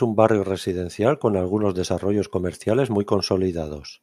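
No technical faults can be heard anywhere in the speech.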